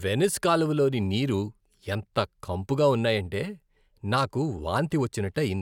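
No technical faults can be heard anywhere in this speech recording. Nothing in the audio calls for a note on timing, level or signal path.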